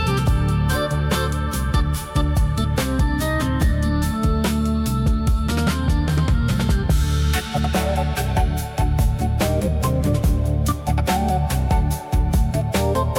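Nothing in the audio stood out as a technical problem on listening.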